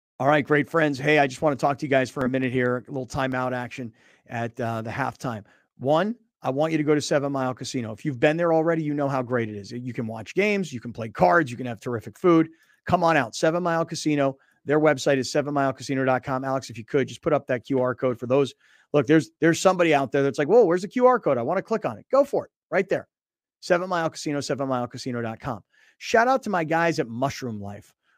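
CD scratch ticks run from 2.21 to 3.32 s, after "talk to you guys" and before "action at uh the". A blemish defeats error correction once per disc revolution, so the player patches the samples, leaving six brief ticks, roughly five a second, the longest only about two milliseconds.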